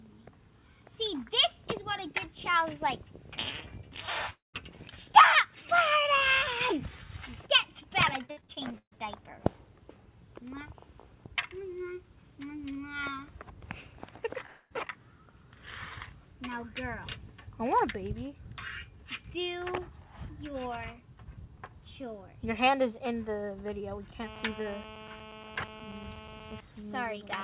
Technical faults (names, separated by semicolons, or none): long network dropout; repeated packet loss (robotic sound); GSM phone buzz